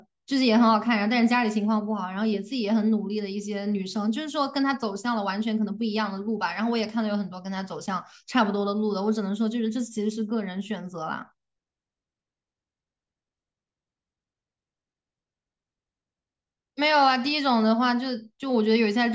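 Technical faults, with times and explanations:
No technical faults can be heard anywhere in the speech. There is nothing to mark with a time or to explain.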